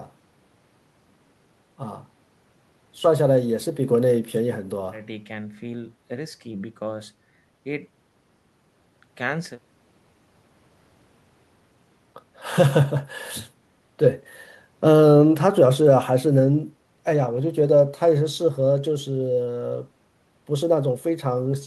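A recording of speech, with no technical fault anywhere in it. There is nothing to place at a particular time and no cause to trace.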